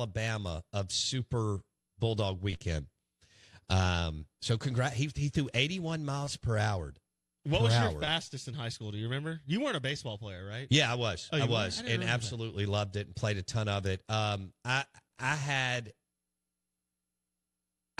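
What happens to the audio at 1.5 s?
Nothing goes wrong at 1.5 s; the speech continues intact through that moment with no dropout, click, glitch or other fault.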